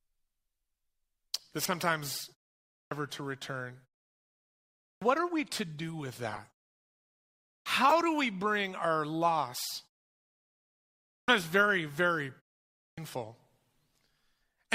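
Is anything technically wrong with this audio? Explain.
Yes, two kinds of fault recur in this speech clip.

Corrupt frame decoded, at 1.64 to 1.70 s, at 6.31 to 6.38 s just after "we to do with", and at 7.89 to 7.92 s. Each time, a compressed frame with flipped bits was decoded anyway, so misread gains and codes push energy into the wrong frequencies for the length of the damaged frames. That is a couple of frames in the first event, a few in the second and a single frame in the third. Each is heard as a brief chirp, squeak or burst of noise, peaking at around -20, -25 and -10 dBFS respectively.

Clipped start after a pause, at 2.71, 4.84 (before "what are we to"), 7.47, 11.09 (before "very very") and 12.77 s. The output device drops into a sleep state during silence and needs time to wake and lock again. As a result, the first 175 to 206 ms of speech after each gap is swallowed. This happens after pauses of 0.44 to 1.29 s. 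Each phrase bursts in abruptly, missing its opening sounds.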